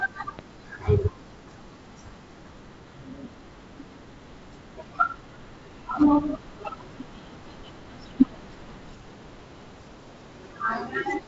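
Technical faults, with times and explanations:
0.39–0.41 s, loud pop: a single sharp pop lasting about 24 ms, peaking around 10 dB above the surrounding speech, which continues underneath at its G.722 wideband telephone bandwidth. A sudden voltage step or pulse has been added to the signal path, likely from a plug being seated, a switch or a static discharge. The circuitry after it rounds the edge, turning a raw step into an audible pop.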